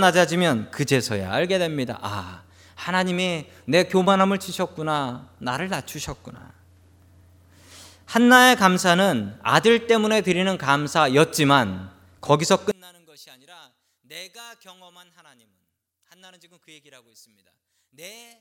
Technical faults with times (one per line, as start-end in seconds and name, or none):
12.71-18.41 one channel inverted